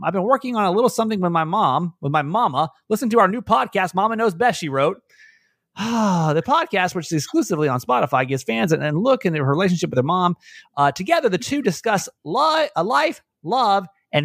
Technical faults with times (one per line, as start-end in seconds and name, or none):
none